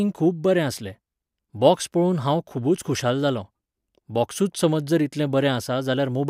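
Listening through this speech recording, nothing stood out as a technical fault at any point.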